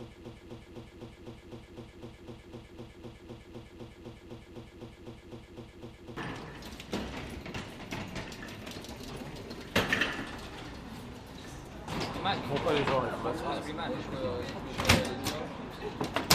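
Right from the start and running until about 6.17 s, the audio is stuck in a broken-record loop. The same fragment, about 253 ms long, plays back to back again and again, and it's already going when the clip opens. That's roughly four repeats a second for six seconds. The likely cause is a player, encoder or stream that stalled and kept resending the last chunk it had, so whatever should have played during that stretch is simply gone.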